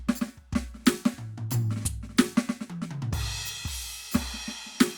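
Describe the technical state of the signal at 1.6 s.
At 1.6 s the music plays through intact, with no dropout, glitch or distortion in the signal.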